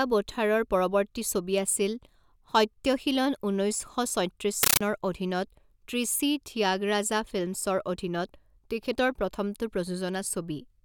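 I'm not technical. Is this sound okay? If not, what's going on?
No. Compressed stream played as audio, from 4.63 to 4.81 s: the speech turns into loud, chattering static. Still-encoded data, which fits a Dolby Digital stream, was played as ordinary sound, so each packed frame comes out as a brief noise burst, 31 times a second.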